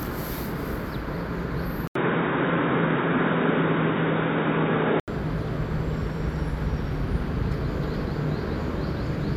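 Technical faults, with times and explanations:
1.87 to 5.08 s, input switched to a poorer device: an 80 ms silence opens the stretch, then the sound turns dull and boxy, with nothing above 3.8 kHz, a level shift of roughly 5 dB and a new faint noise floor about 45 dB down. It clears again at 5.08 s. The likely cause is a change to a narrower-band microphone. The gap at the switch and the changed tone, level and noise set this apart from a plain filter or codec bandwidth drop.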